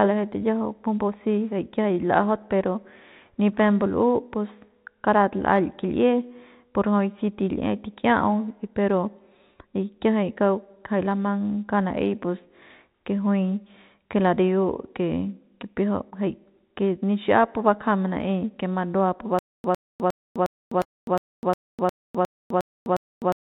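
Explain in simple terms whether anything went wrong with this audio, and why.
Two things went wrong in this speech recording. At 16.1 s there's a short concealed packet loss: about 20 ms of the call never arrived in time, so the receiver papered over the gap by stretching the sound that came just before it and then blending back into the real audio. You hear it as a tiny smear or wobble.

The bigger problem starts at 19.39 s and runs to the very end: a stutter with silent gaps. A clip of roughly a tenth of a second plays, then there's a quarter second of dead silence, and the same fragment comes back, about every 0.36 s, eleven times over. That pattern likely comes from the stream stalling and replaying its last scrap of audio on each retry, so whatever should have been said in those final four seconds is simply gone. Underneath all of this you can hear that the audio went through a phone-style call path, with nothing above 4 kHz, which gives it that narrow telephone sound.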